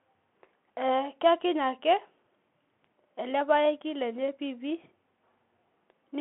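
A speech recording carried throughout by a Bluetooth CVSD headset codec: nothing passes above about 3.8 kHz, the line band runs roughly 200 Hz to 3.4 kHz, and a granular hiss with scratchy s sounds, which fits 64 kbps one-bit delta coding, sets it apart from a clean telephone band-limit.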